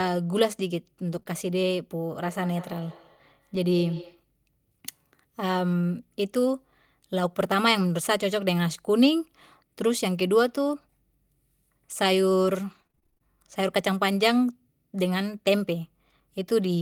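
A speech recording whose transport faults cluster early and late. At 1.15 to 1.17 s one packet was lost, and the decoder played the low-bitrate copy carried in the next packet, so this lost packet rebuilt from error correction leaves no gap, only a 20 ms patch that sounds rougher and noisier. Right after, two short concealed packet losses follow at 1.19 to 1.23 s and 1.23 to 1.27 s. The receiver extended the preceding sound to fill each missing 20 ms, then blended back, which is heard as a brief smear or wobble. From 2.16 to 4.27 s a second device in the same room plays back the call, and its sound re-enters the first microphone. This feedback echo between two devices returns the speech about a fifth of a second later, peaking at about 20 dB below it, each repeat thinner and more ringing. Between 12.71 and 13.22 s repeated packet loss sets in. The decoder patched a rapid string of holes, none much over 25 ms, covering over a third of that half-second, so the speech turns choppy and robotic, with fragments missing.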